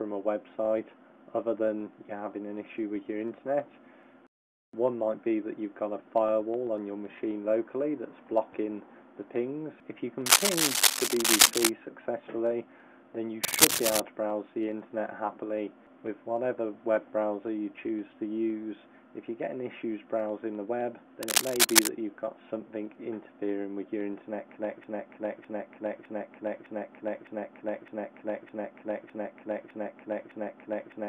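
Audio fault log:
10.26–11.71 s, 13.43–14.00 s, 21.23–21.87 s: cable scratch noise. Ragged rustling bursts sit about 5 dB over the sound, likely a worn lead or connector being jostled.
24.84 s to the end: broken-record loop. A 0.61 s chunk repeats back to back ten times, likely a stalled player or stream resending its last fragment, so the real audio is lost.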